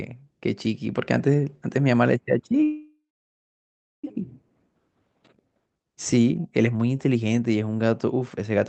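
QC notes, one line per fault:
2.63–4.06 s, call audio freeze: the sound trails off into a fading buzz or hiss, goes silent for about a second, then picks up right where it stopped, so nothing's missing but everything after runs 1.4 s late. Likely stalled packets emptied the jitter buffer.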